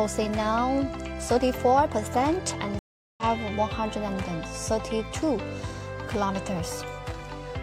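At 2.79 s the audio drops out for about 390 ms, and when it picks up again at 3.23 s it's jumped ahead by roughly 0.4 s. That's a classic stream reconnect: the connection broke, the player reconnected and restarted its decoder mid-stream.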